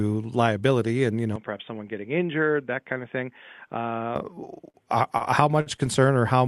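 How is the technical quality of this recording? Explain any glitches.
The recording has two kinds of glitch: one stretch where the sound drops in quality, and a cluster of short stalls near the end. The rest passed through a call-codec path, with the top band ending near 12 kHz.

From 1.36 to 4.16 s, the input switched to a poorer device, likely a different microphone or a headset's call profile. Nothing reaches above 3.6 kHz there, so the sound turns dull and boxy. The level falls by about 5 dB. A faint new noise floor appears, well below the signal. There is no silence at the changeovers. The brightness simply vanishes, then returns.

Four short stalls from late packets follow. They occur at 4.69 to 4.85 s, 5.18 to 5.22 s, 5.61 to 5.68 s and 5.76 to 5.80 s. Each time a packet arrived late and the jitter buffer ran dry. The receiver held the last sound for 47, 26, 53 and 17 ms. Then it resumed where it stopped. 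Nothing is lost. Each stall briefly smears or buzzes the sound, and the timing drifts slightly later.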